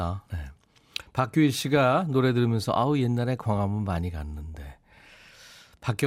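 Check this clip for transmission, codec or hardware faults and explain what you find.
One fault is present: DAB burbling, from 4.55 to 4.59 s. Weak reception let a small fraction of a percent of bits pass error correction uncorrected. Damaged samples put short blips of noise in single sub-bands, and damaged scale factors make sub-bands jump in level. The result is a brief burst of burbling, which points to several MP2 frames being hit.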